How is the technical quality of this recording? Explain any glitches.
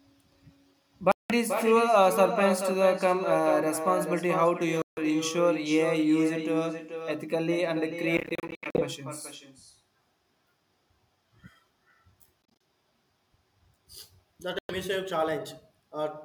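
The recording has two problems: a persistent echo over the whole speech clip and five short gaps where the sound drops out.

Echo with no canceller runs throughout. The far end is apparently playing the call over a loudspeaker, and its microphone feeds that back with nothing removing it. Every phrase returns roughly 0.4 s later, about 7 dB below the direct speech, as a thinner shadow trailing each syllable.

The dropouts sit at 1.12–1.32 s (about 183 ms missing), 4.82–5.01 s (152 ms), 8.17–8.84 s (320 ms lost in bursts spread over 0.61 s, the longest run 76 ms), 12.43–12.61 s (107 ms in short bursts, the longest 30 ms), and 14.59–14.72 s (107 ms). They are likely Bluetooth dropouts: packets that miss their delivery window are discarded, so the output goes silent and resumes further on, as though the sound kept playing unheard.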